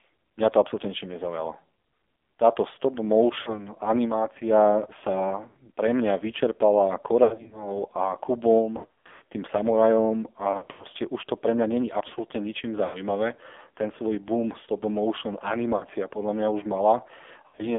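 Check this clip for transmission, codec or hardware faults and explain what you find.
Two faults are present: heavy AMR narrowband codec damage throughout, and repeated bursts of lost AMR speech frames.

AMR narrowband mobile codec, whole clip: the speech is confined to roughly 300 Hz to 3.5 kHz and sounds buzzy and synthetic. A low-rate vocal-tract model with sparse pulse excitation produces this, consistent with a rate near 5.9 kbps.

Lost AMR speech frames, at 3.42–3.67, 5.48–5.57, 7.24–7.81 (after "sa pre mňa vyčerpala"), 8.78–9.22, 10.52–10.87 (between "tým samurajom" and "už to pre mňa"), 12.86–12.99, 15.76–15.84 (between "svoj boom stop motion" and "podľa mňa už") and 17.48–17.63 s. The decoder repeats the last good parameters at falling gain, so the speech smears, warbles and dips. The longest gaps run about 80 ms.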